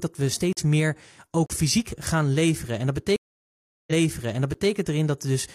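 At 0.53 s, just after "dat we", the speech drops into a block of digital silence for about 42 ms, and a second block from 1.46 to 1.50 s (about 35 ms) sits just before "fysiek gaan leveren". In each, the output buffer likely went unfilled and was replaced by zeros. The signal cuts straight to nothing and back with no fade, and the gap is heard as a short hole.

From 3.16 to 4.71 s comes a stream reconnect. The connection dropped and the audio goes silent for 711 ms. The player then reconnected and restarted the decoder mid-stream, and playback resumes about 0.84 s earlier than where it broke off, so a stretch of speech is heard again. At 4.54 s, inside that restart, an 11.6 ms block of digital silence adds a tick, which fits a 512-sample buffer going unfilled.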